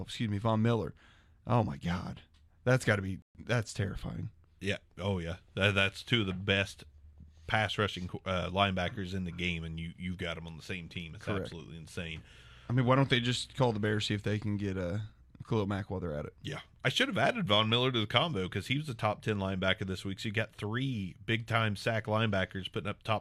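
At 3.22 s, just after "that's got to be", the receiver briefly lost good data and there is a digital broadcast dropout. The decoder had no valid frames to play, so it muted rather than output garbage, and resumed once clean frames arrived at 3.40 s. The speech drops to silence and picks up again mid-stream. About 128 ms of programme is simply missing, which fits three lost frames, and nothing fills the gap.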